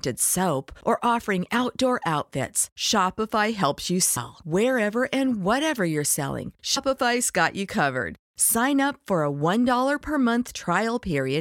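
At 4.16 s, right after "helps you", there's a case of compressed frames skipped: a few whole frames, roughly four, never got played, so the speech lurches forward by about a tenth of a second. It happens again at 6.76 s, between "and whatever you're selling" and "got you covered", this time roughly seven frames and around 150 ms gone. The frame spacing fits about 23 ms per frame, and each join is heard as a quick jolt where the audio jumps ahead.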